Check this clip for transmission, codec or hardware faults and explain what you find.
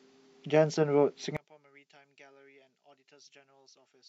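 One fault is present: from 1.37 s to the end, the speech drops by about 31 dB when heard in mono. The likely cause is one channel inverted, with one stereo channel's polarity flipped so the shared centre content cancels on summing, leaving only a faint residue of the speech.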